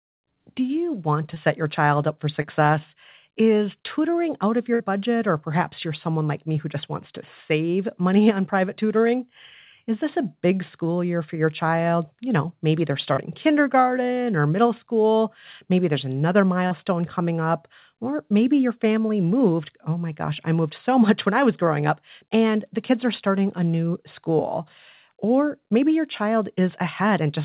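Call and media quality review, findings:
Short concealed packet loss at 1.34, 2.42, 13.14 and 16.67 s. Brief smears and small wobbles, about 40 ms each at the first two, about 55 ms at the last two. Probable component: network/jitter buffer, with decoder concealment. Mechanism: 20 ms of audio missing at the first two points and 40 ms at the later two. The receiver extended the preceding sound to bridge each hole, then cross-faded into the real signal. Short consonants there may drop out.

Burst of packet loss at 4.74 to 4.82 s. A held buzz or fading hiss lasting about 60 ms, then the sound resumes with that stretch gone. Probable component: network, consecutive packets lost or arriving too late. Mechanism: the decoder continued the last sound and attenuated it across the gap. Band ends at 4 kHz throughout, which fits a G.711 mu-law call path at 64 kbps.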